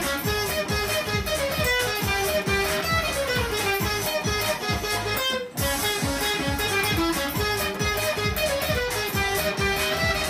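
Nothing in this one calls for comment, since no technical fault turns up anywhere in the audio.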